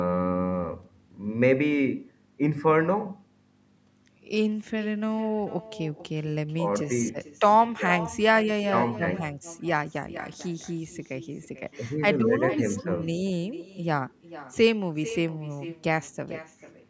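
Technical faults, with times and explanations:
Throughout, echo with no canceller: every phrase of the speech returns as a fainter, thinner copy roughly 0.4 s later, at about 14 dB below the original, because the far end's loudspeaker feeds its microphone and nothing subtracts that path before it travels back. On a waveform each burst has a smaller trailing twin; on a spectrogram each syllable's pattern repeats, weaker, offset along the time axis, both copies stopping at 8 kHz from the call's microphone processing.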